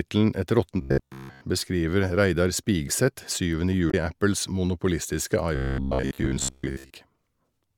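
From 0.81 to 1.41 s, the speech turns into a rigid, metallic buzz. This is robotic sound from repeated short buffers. The buzz sits at about 67 Hz, which fits a buffer of roughly 15 ms. Fresh audio likely arrived too seldom, so the same short slice was played again and again. Roughly two thirds of the sound here is repeats. The real audio between them is lost.

At 3.90 to 3.94 s, a brief glitch cuts in. This is damaged data in a compressed stream. The decoder could not read those frames and lost its place. It hunted for the next good frame, leaving a short glitch.

From 5.56 to 6.90 s, the same robotic buzz returns at about 67 Hz. It likely comes from the same repeating of short slices. It is longer this time, about 1.3 s.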